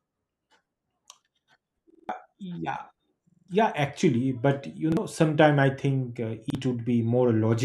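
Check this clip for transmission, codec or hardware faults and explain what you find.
The speech has one recurring fault, a repeated buffer, at 1.90–2.09 s, at 3.30–3.48 s just before "yeah actually", at 4.92–4.97 s just before "sometime I think uh", and at 6.50–6.55 s just after "sometime I think uh". When fresh audio arrived late, the device replayed its last 46 ms block, which fits a 2048-sample buffer. It played four extra times in the first two events and once in the last two. The result is a hard-edged stutter of identical slices that skips about a fifth of a second, or about 50 ms, of speech. Unlike a dropout, there is no silence, only the same fragment looping.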